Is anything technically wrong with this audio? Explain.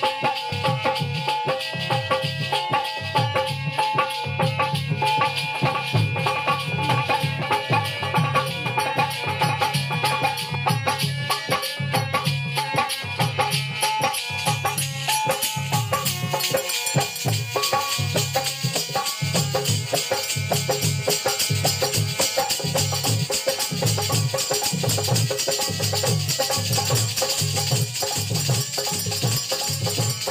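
Yes. From 5.25 to 10.55 s there is a doubled audio track, likely from the signal being captured a second time through a slower path. A full-band copy trails the original by roughly two seconds, about 5 dB quieter, with no room colour, and it cuts in and out abruptly.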